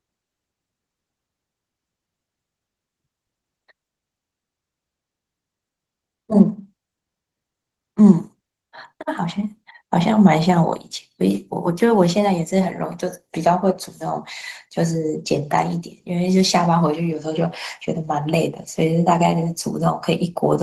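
Throughout the clip, Opus voice compression leaves the speech hoarse and faintly robotic, with a coarse, buzzy grain from roughly coded excitation. Unlike a plain low-pass, the top end survives, which fits hybrid coding at around 16 kbps.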